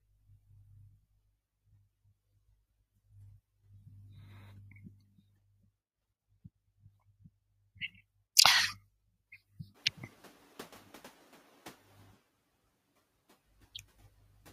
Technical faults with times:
0.00-14.53 noise suppressor artifacts
9.74-11.77 noise suppressor catching up

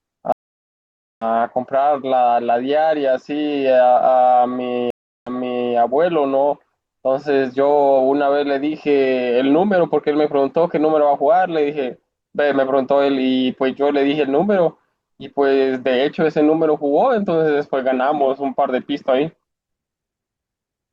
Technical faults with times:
0.32-1.25 stream reconnect
4.90-5.73 stream reconnect

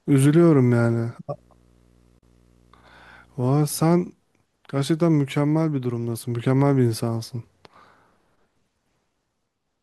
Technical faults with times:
1.32-4.09 video or display buzz
2.18-2.23 digital broadcast dropout

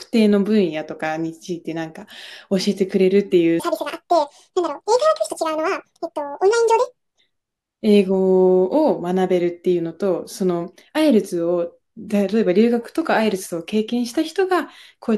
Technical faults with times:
3.60-7.19 section at the wrong speed

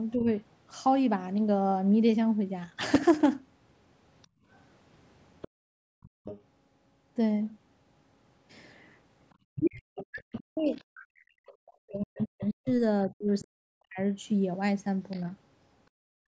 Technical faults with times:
0.16-0.28 speech suppressed in double talk
2.87-3.26 processor overload crackle
4.22-6.41 other side's voice leaking through
4.27-6.24 background gated by the echo canceller
9.55-13.44 other side's voice leaking through
9.58-13.99 speech suppressed in double talk
15.11-15.21 other side's voice leaking through
15.91-16.30 background gated by the echo canceller

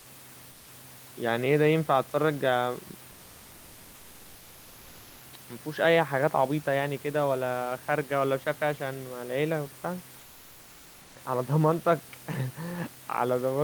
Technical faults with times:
10.19-11.15 comfort noise in place of the background

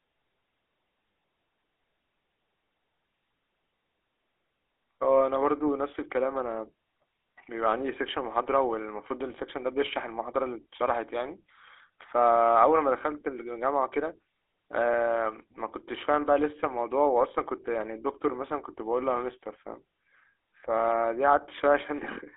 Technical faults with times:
0.00-22.36 GSM full-rate codec
1.12-1.28 lost GSM frames

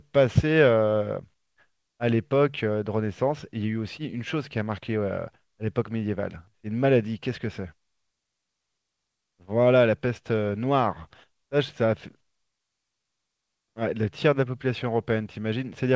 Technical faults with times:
none

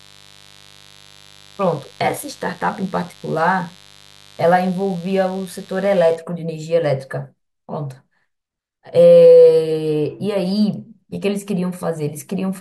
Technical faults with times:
0.00-6.16 mains buzz

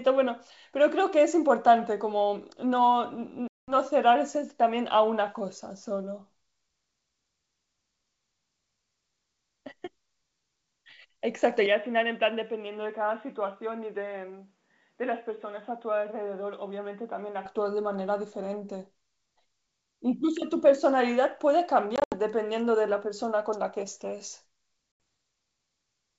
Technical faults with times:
3.48-3.76 packet loss on an ADPCM call
11.66-17.46 input switched to a poorer device
21.96-22.20 packet loss on an ADPCM call
24.92-25.00 packet loss on an ADPCM call

